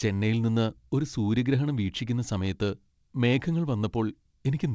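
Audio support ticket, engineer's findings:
No faults found in this speech recording. The call path through the G.722 codec sounds as expected, with nothing above 8 kHz, which fits wideband coding at 64 kbps.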